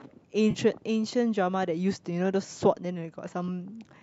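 AAC frame loss with concealment occurs from 0.51 to 0.58 s, early in the speech. About 40 ms of coded audio never reached the decoder, which fits a run of four short low-delay frames, likely from the AAC-ELD stream. The decoder covered the gap by reusing the last good spectrum with altered phase and smoothed energy. That is heard as a brief smeared, noisy and phasey patch rather than a clean dropout.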